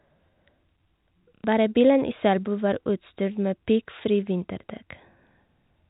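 The clip is telephone-band speech. Nothing above 4 kHz comes through, consistent with G.711 coding. From 1.35 s to 1.44 s there is packet loss with the last packet repeated. About 90 ms of audio is missing. The receiver fills the gap by replaying the last packet it got. The result is a short robotic stutter with a buzz near 33 Hz, which fits three lost 30 ms packets.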